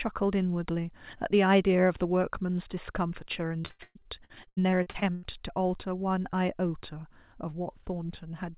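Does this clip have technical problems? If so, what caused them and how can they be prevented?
Yes. From 3.48 to 5.25 s there is repeated packet loss (robotic sound): many short holes, the longest 120 ms, are patched by stretching the previous sound, so about 38% of that stretch is concealed and it turns choppy. It differs from a single dropout because the holes come in quick succession and are filled rather than left silent. The narrowband sound, with nothing above 4 kHz, fits a G.711 call path. Preventing it means a steadier network link, with forward error correction or a deeper jitter buffer to absorb late packets.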